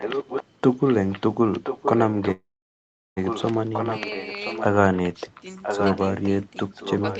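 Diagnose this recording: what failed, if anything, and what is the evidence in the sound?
A second copy of the speech trails the original by about 1.02 s, at 0 to 0.44 s, 0.81 to 1.21 s, 1.63 to 6.29 s and 6.72 to 7.19 s, mostly about 5 dB below it and fainter near 1 s. The likely cause is an echo leak: a loudspeaker at the far end was picked up by its microphone, and the call's echo canceller failed to remove it.

From 2.31 to 3.19 s the sound stalls, briefly sustained and then silent for about 0.74 s, and resumes with nothing skipped, now 0.85 s later. This points to a call audio freeze, likely in the network stage: delayed packets emptied the jitter buffer, so the receiver stretched audio until they arrived.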